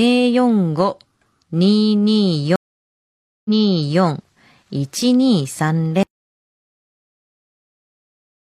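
A stream reconnect hits at 2.56 s and runs to 4.01 s. The connection drops, leaving 0.89 s of silence, and a new decoder picks the stream up 0.56 s earlier than where it broke off, so a stretch of speech is heard twice.

An audio dropout to silence begins at 6.03 s and lasts to the end. The speech cuts off abruptly into silence with no room tone, most likely because the input was lost while silence kept being written.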